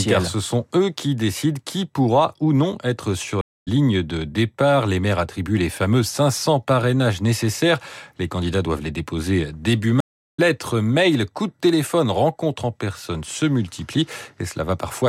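A speech clip with two stream reconnects: the connection dropped and the player restarted its decoder mid-stream, so sound cuts to about 0.26 s of silence at 3.41–3.68 s after "ou non être sur", resuming roughly 0.2 s further on at "de départ". The same happens at 10.00–10.40 s after "doivent les déposer début", with about 0.38 s of silence and a skip of roughly 0.3 s before "mails coups de téléphone".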